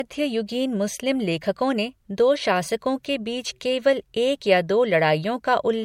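From start to finish, the speech has nothing above 16.6 kHz. The top of the spectrum stops at a hard ceiling. The clip shows low-bitrate audio saved at a high bitrate. It was likely first squeezed through MP3 at a low rate, around 64 kbit/s, then encoded again at a much higher rate. The second pass cannot bring back what the first removed. The missing treble and the first encoding's artefacts remain throughout.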